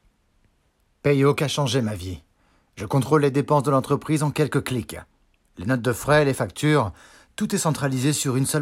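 At 2.79 s and again at 6.35 s the sound jumps abruptly, and roughly 20 ms of material is simply missing, with the audio on either side butted together. The likely cause is a dropped buffer (overrun): samples weren't read before the hardware overwrote them. Unlike a dropout that leaves a gap, no silence is inserted; the audio skips ahead.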